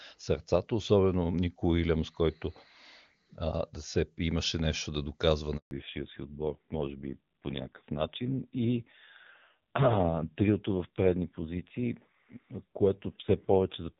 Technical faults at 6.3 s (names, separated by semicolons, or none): fallback to narrowband